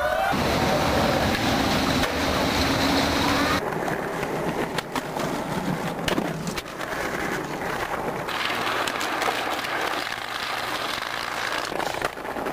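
From 8.29 s to 11.71 s a section at the wrong speed runs at double rate, so the sound turns hurried and jumps up roughly ten semitones in pitch, then drops back at 11.71 s. It is likely a playback or edit stage fitting the audio to the wrong clock.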